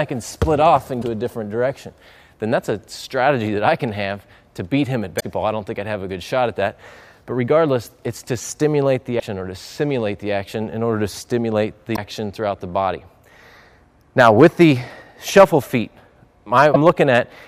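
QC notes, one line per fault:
0.98–1.04, 5.16–5.23, 9.16–9.21, 11.93–11.98 and 16.71–16.77 s: damaged data in a compressed stream. Each is a brief glitch of about 55–70 ms as the decoder misreads corrupted frames and resyncs.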